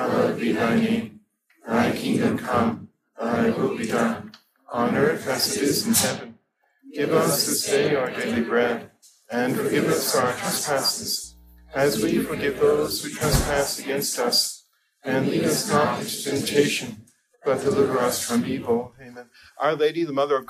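From 11.24 s to 12.95 s a mains hum appears: a steady low tone at 60 Hz, sitting around 30 dB below the programme level. Power-line energy is leaking into the signal path, most plausibly through a ground loop or coupling from a nearby transformer. It sounds like a constant low drone under the audio, with some low harmonics, and it stops after roughly 1.7 s.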